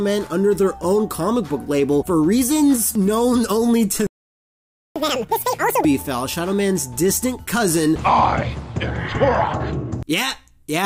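The audio cuts out cold at 4.07 s and stays silent until 4.96 s, a gap of about 0.89 s. That's a playback stall, most likely the player running dry of buffered data or having its output thread blocked, since the sound just halts mid-flow and then resumes rather than fading or glitching. Right after it comes back, from 4.96 s to 5.85 s, you get catch-up at higher speed. The player is chewing through its backlog at double speed by resampling, so everything rushes and jumps up in pitch by roughly ten semitones, close to an octave. Once the lost ground is made up at 5.85 s, speed and pitch drop back to normal. That span is almost exactly as long as the stall, which is what you'd expect when 2x playback has to recover the time spent silent.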